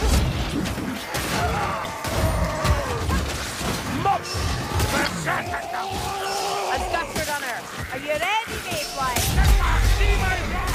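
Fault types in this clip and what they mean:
Damaged data in a compressed stream, at 1.82 and 5.03 s: each time a stretch of corrupted bytes makes the decoder misread its frames, lose sync and hunt for the next valid header, leaving a short glitch of about 40 ms in the sound.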